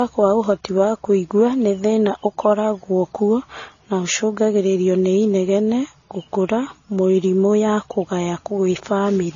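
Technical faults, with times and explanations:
Throughout: transcoding between lossy codecs. The speech is dull, with nothing above about 7.1 kHz, and the artefacts of three codecs sit on top of each other. The likely cause is a chain of low-bitrate encoders, ending in MP3. Each pass spent its few bits re-encoding the previous codec's errors while adding its own, and the lowest bandwidth limit in the chain stayed in place.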